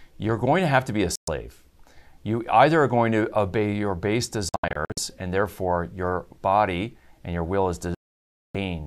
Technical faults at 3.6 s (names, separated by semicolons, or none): none